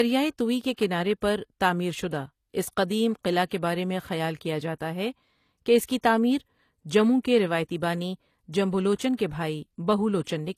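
Low-bitrate audio saved at a high bitrate runs through the whole speech clip: nothing sounds above 14.9 kHz, and the coding artefacts persist. This likely comes from a low-bitrate AAC encode later saved as high-bitrate MP3, which cannot restore what was discarded.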